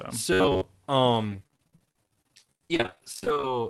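From 0.33 to 0.64 s, robotic sound from repeated short buffers turns the speech into a rigid 93.8 Hz buzz, likely from a roughly 10.7 ms block replayed over most of the span. From 1.27 to 3.47 s, repeated packet loss leaves choppy speech with pieces missing: nearly half the stretch is patched with extended sound, with holes of up to 52 ms, over the call's Opus path band-limited to 12 kHz.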